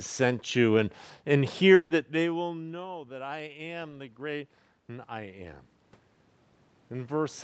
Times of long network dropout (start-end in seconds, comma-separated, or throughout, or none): 1.74-1.91